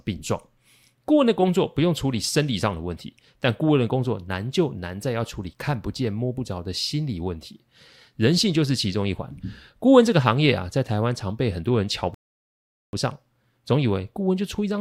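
At 12.14 s the player exhausted its downloaded audio and halted, a rebuffering stall, until more data arrived. The speech drops to silence until 12.93 s, then continues from exactly where it stopped, with nothing skipped and about 0.79 s added.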